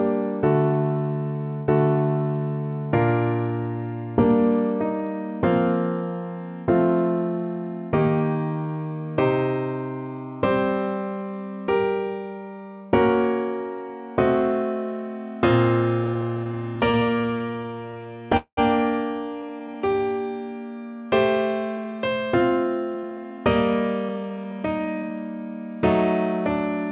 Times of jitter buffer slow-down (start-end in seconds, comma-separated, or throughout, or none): 19.42-20.00